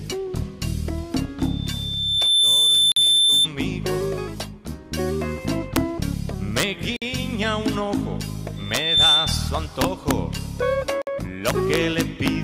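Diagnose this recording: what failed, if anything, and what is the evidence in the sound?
Loudspeaker feedback squeal, acoustic/analogue stage. A pure 3.6 kHz tone rises from 1.39 s and swells for about a second before it dies at 3.48 s. It returns at 8.56 s, climbing faster this time, in about 0.4 s, and lasting to 9.56 s. At its peak it sits well above the programme. That's the mic hearing the speaker it feeds, with loop gain above one at that single frequency.

Gap at a join of encoded pieces, codec/storage stage. Short holes open at 2.92 s (about 46 ms), 6.96 s (about 53 ms) and 11.02 s (about 53 ms). They fall every 4 s, and the sound resumes right where it left off each time. The edges are smeared by the codec. That regular spacing points to 4 s chunks encoded separately and butted together, with each chunk's encoder delay and final-frame padding left in.

Integer overflow, sample-format conversion or an integer gain stage. 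There are sharp, violent cracks on loud passages, much nastier than clipping. The first is a single crack at 5.76 s. Others follow at 6.58 to 6.63 s, 8.75 to 8.77 s, 9.81 to 10.11 s, and a long stretch from 11.47 to 12.28 s. Peaks only needed to overshoot by about 2 to 4 dB. Instead of saturating, the values wrapped to the opposite sign.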